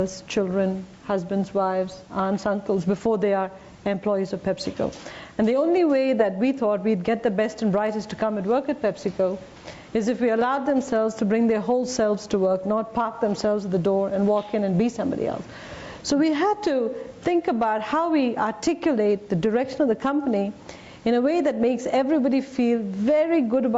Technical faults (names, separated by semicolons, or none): gain pumping